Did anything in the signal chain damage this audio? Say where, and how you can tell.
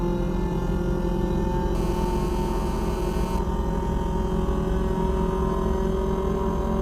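Yes: GSM phone buzz in the analogue wiring, where nearby call transmissions are rectified, adding a steady raspy 217 Hz buzz, about 15 dB below the signal, from 1.75 to 3.39 s.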